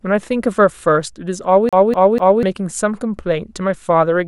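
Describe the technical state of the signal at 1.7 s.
At 1.7 s the speech is caught in a CD stuck on one turn, from 1.69 to 2.43 s. A scratch keeps knocking the laser back one track, so the same 246 ms segment repeats three times, each jump marked by a brief mute, giving an even, rapid stutter.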